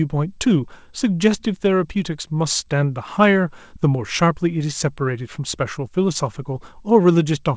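No technical faults are audible.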